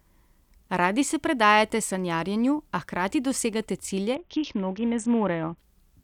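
From 4.15 to 5.58 s, after "sanjarjenju a hkrati dosegate", a Bluetooth SBC bit pool drop empties the spectrogram's top sub-bands, dulling the treble and adding grit.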